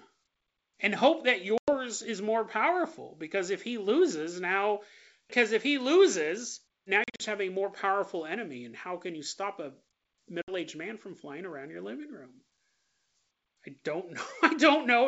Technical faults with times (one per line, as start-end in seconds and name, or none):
1.58-1.77 packet loss on an ADPCM call
7.04-7.22 packet loss on an ADPCM call
10.42-10.52 packet loss on an ADPCM call